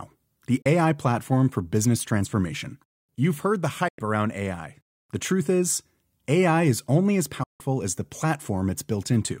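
Digital broadcast dropouts break this speech clip at 0.62 s, 3.88 s just after "heard the", and 7.43 s after "is only as". They are quick fades into silent holes of about 32, 96 and 160 ms, which fits the receiver muting while one, three and five 32 ms frames failed, discarding that audio.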